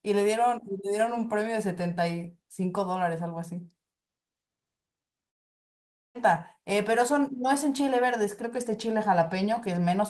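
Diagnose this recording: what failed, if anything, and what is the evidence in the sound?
At the network stage, the speech cuts out at 5.29 s and does not return until 6.17 s, close to 0.9 s of lost audio. This is most likely a long network dropout. The receiver briefly stretches the last sound into a fading tail, then holds near-silence until packets resume, and the speech picks up with that stretch simply missing. A spectrogram shows a blank vertical band across all frequencies, and the waveform sits flat at the baseline.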